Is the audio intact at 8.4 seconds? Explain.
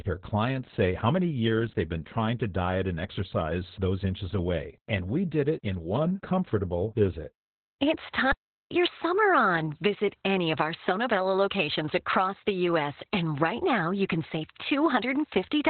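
No. From 8.32 to 8.71 s the speech cuts out into silence for about 0.4 s. This is a playback stall, likely the player running short of data or its thread being blocked, so output halted until it caught up.

The whole stretch, including this moment, also carries Opus voice compression in its SILK narrowband mode. Nothing is present above 4.2 kHz, and the coarse excitation coding makes the speech muffled, hoarse and somewhat robotic, which fits a very low bitrate of around 8 kbps.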